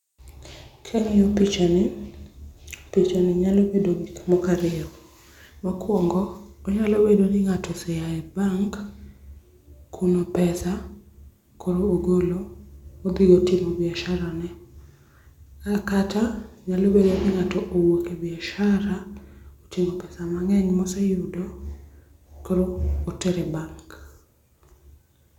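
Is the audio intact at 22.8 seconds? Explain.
Yes, at 22.8 seconds the speech plays through cleanly, with no dropout, click, distortion or other fault to be heard at that moment.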